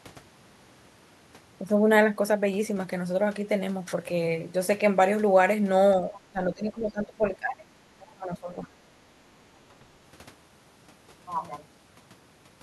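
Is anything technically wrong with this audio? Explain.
Yes. There are two kinds of fault, both tied to echo cancellation during a two-way call.

Speech suppressed in double talk happens from 6.32 to 7.66 s and again from 8.1 to 8.59 s. The talker's level drops sharply, by roughly 20 dB in the first stretch and about 25 dB at its deepest in the second, so the speech sounds ducked. The likely cause is the echo canceller failing to separate the talker from loudspeaker echo while both ends spoke, and attenuating everything.

The other side's voice leaks through briefly from 8.01 to 8.07 s, just before the second dip. It is a short, faint fragment, around 30 dB below the talker's speech, heard as a scrap of a second voice. This is likely far-end audio played on the talker's loudspeaker that the echo canceller did not fully remove from the microphone signal.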